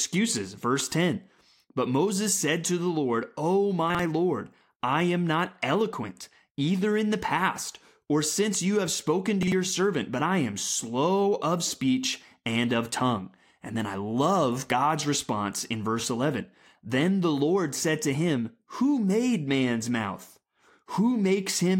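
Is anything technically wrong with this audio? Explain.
Yes. Chunks out of order at 3.90–3.99 s and 9.43–9.52 s (after "since you have spoken", before "servant but I am"): a 46 ms chunk plays one place late, giving a jumbled moment. Unlike a dropout, no audio is missing.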